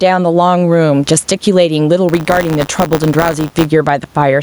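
Gain pumping runs through the whole clip. The input gain is likely set far too high, so a fast limiter clamps down on every loud syllable and releases in the gaps. The level swings by about 10 dB, and the room noise sits about 42 dB below the speech, leaving the speech squashed.

From 2.08 to 3.67 s, buffer tearing sets in. The software writing the ring buffer and the hardware reading it have drifted until they cross within each period. A small slice of every buffer carries audio about 20 ms old, joined hard on both sides, which produces a rattling, robotic 100 Hz buzz that tracks the speech.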